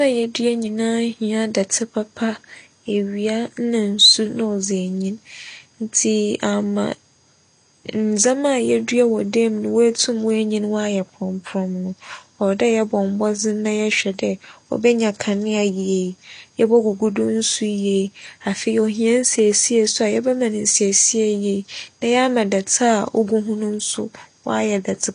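Speech, and the whole thing carries audible AAC compression damage: nothing above about 9.7 kHz, a dull, smeared top end, and a warbly, fizzy edge on sibilants. That's likely AAC-LC coding at a low bitrate, which fits something around 32 kbps.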